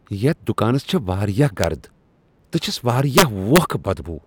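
Integer overflow at 1.64 s and again from 3.18 to 3.58 s: loud speech peaks, driven about 1 dB and then about 4 dB past the integer limit, wrap to the opposite sign instead of being held, producing violent cracks far harsher than clipping.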